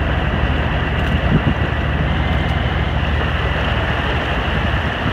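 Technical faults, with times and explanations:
2.08 to 2.94 s, drift correction step: the sound runs about 6% faster and a semitone sharp, then snaps back, likely a one-step playback-rate jump resyncing two clocks.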